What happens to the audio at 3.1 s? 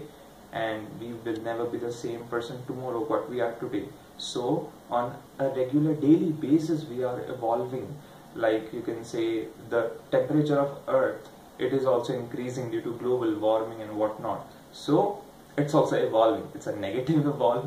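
Nothing goes wrong at 3.1 s; the audio plays through that moment intact, with no dropout, click or other fault.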